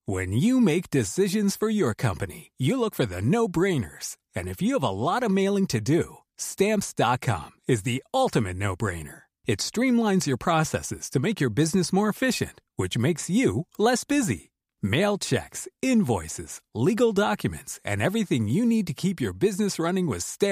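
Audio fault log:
No fault to log for this audio.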